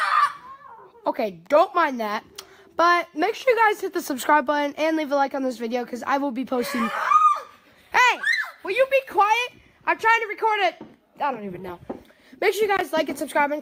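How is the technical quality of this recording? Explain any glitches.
No glitches are audible anywhere in the recording, so there is nothing to explain.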